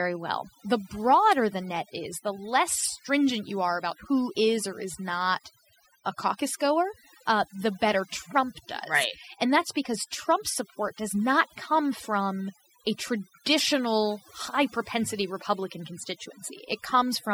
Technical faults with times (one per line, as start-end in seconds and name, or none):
0.00-17.33 overdone noise removal